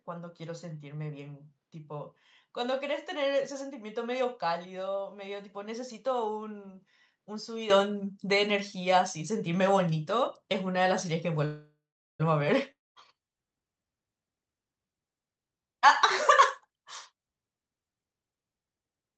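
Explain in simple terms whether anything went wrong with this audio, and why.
For the first 7.7 seconds the sound is noticeably duller and quieter, with nothing above about 7.6 kHz and a faint extra hiss. At 7.7 s it clears up with no pause. That's most likely an input switched to a poorer device, a narrower-band mic in use at the start.

From 11.45 to 12.21 s there's a call audio freeze. The last sound hangs briefly, then about 0.43 s goes silent before things pick up where they stopped. Delayed packets are the likely cause. That adds a 0.74 s gap, but nothing is lost.

At 12.71 to 12.97 s a long network dropout follows. There's a brief fading tail, then around 0.21 s of silence. When the sound returns, roughly a quarter second of it has been skipped for good, likely because those packets never arrived.

Then there are two jitter buffer speed-ups, where the receiver trims tiny slices to catch up on built-up delay. 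From 15.34 to 15.88 s the sound runs at 175% speed, losing around 0.4 s. From 16.67 to 18.07 s it runs at 124%, losing roughly 0.3 s. The pitch stays the same in both, but it sounds rushed.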